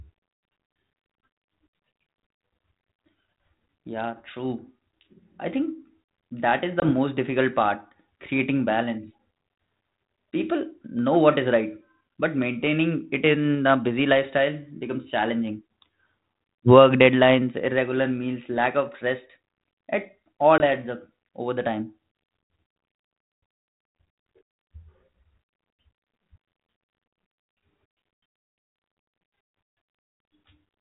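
This speech recording has two brief hard-edged holes, at 6.80 to 6.83 s between "I think that is" and "most difficult", and at 20.58 to 20.61 s between "lack of rest it" and "adds up over the". Each is about 20 ms of silence, and the speech resumes slightly distorted for a short stretch. This is packet loss on an ADPCM call, roughly one packet each time, on a G.726 ADPCM link whose light band-limited grain fits 32 kbit/s. The gap was filled with silence, and the decoder's adaptive predictor and step size drifted from the sender's, needing some tens of milliseconds to resynchronise.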